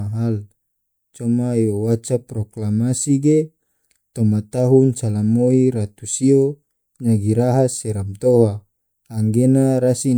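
No technical faults can be heard anywhere in this recording.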